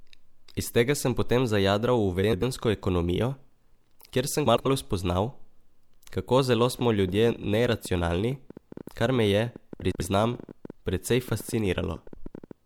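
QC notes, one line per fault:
2.23–2.43 s, 4.46–4.66 s (just after "kjer sem"), 9.81–10.01 s, 12.07–12.27 s: frames out of order. In each case two adjacent 96 ms blocks were decoded in swapped order, which fits runs of four frames each. Each stretch of about 0.2 s plays its second half first, so the speech briefly garbles into a flutter. Nothing is dropped, so timing is unchanged.
6.79–12.52 s (starting after "kako zelo"): train of clicks. Around seventy similar short pulses at roughly 10.8 per second, spaced irregularly, peaking at around 5 dB above the speech. They sit on top of the signal as an uneven ticking that carries through the pauses as well. The likely cause is interference from nearby equipment or a faulty connection or power supply injecting pulses into the path.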